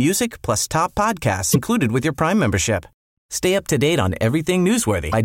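At 1.50 s the speech breaks up briefly until about 1.56 s, and the same thing happens again from 5.08 to 5.14 s. Both are damaged data in a compressed stream. A stretch of the encoded bytes is corrupted, so the decoder misreads those frames and loses its place until it locks onto a clean frame header. That leaves a brief glitch of roughly 56 ms each time in place of the speech.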